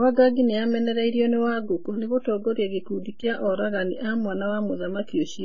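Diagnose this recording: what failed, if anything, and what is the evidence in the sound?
The failure sits at the codec stage and runs the whole length of the speech: AAC compression, likely AAC-LC at a very low rate. Nothing reaches above 7 kHz, so sibilants sound dull and the speech is smeared, with a warbling, fizzy texture on sustained sounds. The damage is heavy, which fits a budget around 16 kbps. On a spectrogram this shows as a hard ceiling at 7 kHz.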